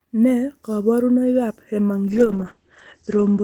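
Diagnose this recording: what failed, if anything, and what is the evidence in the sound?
A call bitrate drop at the codec stage from 2.08 s to the end: bitrate falls from 32 to 13 kbps, so the speech turns coarse and muffled. The spectrogram shows energy above 8 kHz vanishing there.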